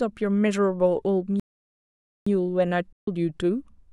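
At 1.40 s the speech cuts out in mid-flow and stays silent until 2.26 s, a gap of about 0.87 s. This is a playback stall. The likely cause is the player running short of data or being blocked. The speech then resumes.

From 2.93 s to 3.08 s there is a hole of about 149 ms. This is AAC frame loss with muting. The decoder zeroed the missing frames, which fits roughly seven lost frames. The sound fades out and back in softly.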